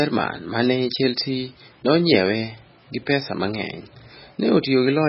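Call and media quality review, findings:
Likely MP3 compression at a starved bitrate, throughout: weak spectral lines drop frame to frame, speech turns watery and swirly, nothing above 5.6 kHz, which fits about 16 kbps.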